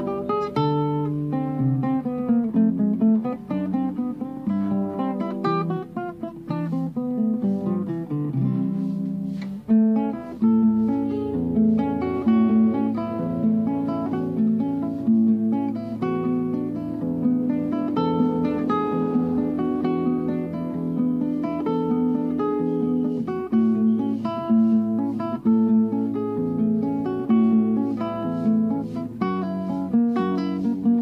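Nothing technical stands out here; the audio just carries on without a single hiccup worth pointing to.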